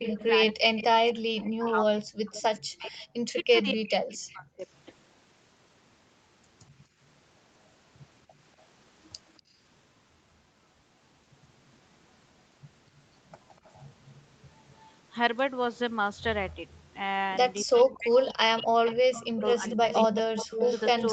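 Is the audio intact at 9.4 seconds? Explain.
No. At 9.4 seconds the echo canceller, reacting to loudspeaker playback, clamped the microphone hard, so the background is gated by the echo canceller. The room sound falls away by about 22 dB until 9.6 s, then returns once the canceller releases.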